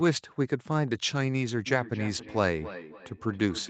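From 1.66 s to the end, a second device on the same call replays this microphone's sound, which the microphone picks up again. This feedback echo between two devices returns each word about every 0.3 s, thinner and ringing, peaking about 14 dB below the speech within the 8 kHz call band.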